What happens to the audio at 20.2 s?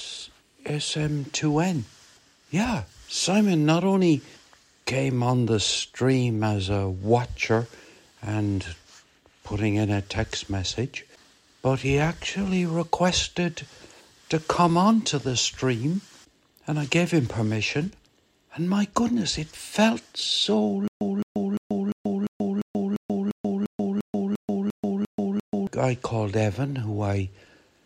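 Nothing goes wrong at 20.2 s; the audio plays through that moment intact, with no dropout, click or other fault.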